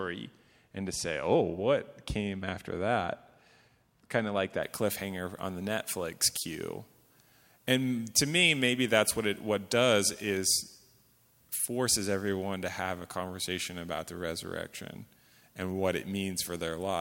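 From 4.63 s, just after "of like", pre-emphasis is left on. It follows the FM 75 µs curve with no de-emphasis, lifting 10 kHz about 13 dB over 1 kHz. The speech turns thin and sibilant, and a spectrogram shows brightened upper bands.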